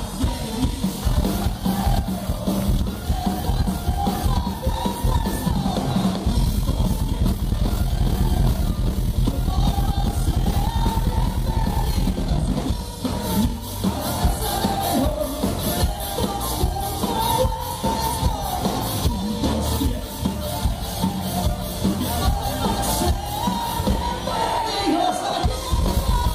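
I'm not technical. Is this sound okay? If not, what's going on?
Yes, this sound is okay, and nothing is going on that needs fixing.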